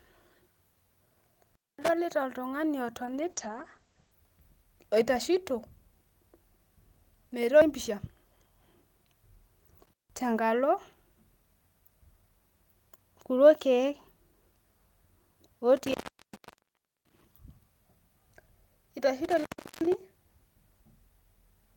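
A speech recording with two kinds of fault. An intermittent contact cuts the signal four times, at 1.44–1.89 s, 9.83–10.20 s, 15.77–17.22 s and 19.24–19.95 s. Each time a loose connection briefly breaks: the audio drops to faint hiss for roughly 0.23 s, 0.16 s, 1.11 s and 0.37 s respectively, with crackle as the contact opens and closes. The third dropout is the longest. Between 3.06 s and 4.19 s there is a call bitrate drop. The speech becomes coarse and muffled, and the top end is cut off above 8 kHz for about 1.06 s at its worst. This points to the call's bandwidth estimate falling sharply, with the encoder pushed from around 32 kbps down to roughly 11 kbps. At that rate Opus codes more coarsely and discards high frequencies, and the sound recovers once the bitrate climbs back.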